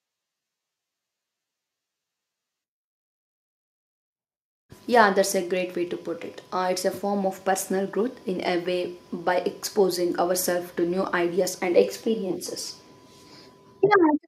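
No technical faults are audible.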